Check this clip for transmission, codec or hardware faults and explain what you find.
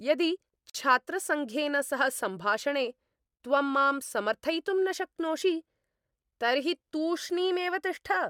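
One fault turns up in the speech: a gap at a join of encoded pieces. From 0.70 s to 0.75 s the sound cuts to a 49 ms silence with smeared edges, then picks up exactly where it left off. Two separately encoded segments were joined untrimmed, so one run's final-frame padding and the next run's start-up delay remain as dead air.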